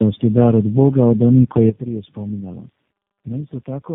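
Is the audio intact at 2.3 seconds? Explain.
No. The speech has passed through three low-rate speech codecs in a row, each decoding and re-coding the previous one's damaged output. This tandem speech coding, consistent with AMR-NB and G.729A links joined by G.711, leaves the sound rough, muffled and warbly, with nothing above 3.7 kHz. From 1.70 s to the end, a sudden gain jump, likely a digital gain setting applied without a ramp, drops the speech and its background noise together by about 12 dB, so 2.3 s sits inside that quieter stretch.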